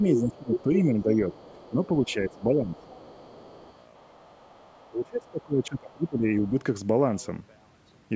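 From 0.0 to 1.34 s the talker's speech sinks and breaks up, dipping by around 15 dB for about a second in total. This is speech suppressed in double talk, likely because the echo canceller attenuated everything while both sides spoke. Within that span, at 0.16 to 0.2 s and 0.54 to 0.59 s, brief scraps of another voice come through nearly as loud as the talker: the other side's voice leaking through, likely residual loudspeaker echo the canceller failed to remove. A faint trace of it continues from 1.01 to 1.86 s. The same suppression returns from 1.7 to 2.83 s, with dips of around 10 dB, and a quiet but steady leak of the far voice runs from 2.29 to 4.9 s. The deepest cut comes from 4.89 to 6.54 s, where the speech drops by as much as 25 dB for roughly one and a half seconds, with another short, low-level scrap of the far side at 6.43 to 6.51 s.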